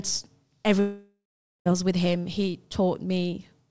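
A long network dropout runs from 0.80 to 1.68 s in this speech clip, which also shows the 8 kHz ceiling expected of G.722 at 64 kbps. At 0.80 s the last sound is stretched into a fading buzz, then roughly half a second of silence follows before speech resumes at 1.68 s, with about 0.86 s of the original simply gone. The likely cause is packets that never arrived, leaving the receiver to conceal the gap before giving up.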